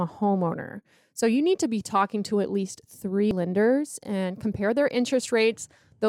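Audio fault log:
3.31 s damaged data in a compressed stream: corrupted bytes in the compressed speech stream made the decoder misread a frame, lose sync and search for the next valid frame header, producing a tiny blip only about 4 ms long.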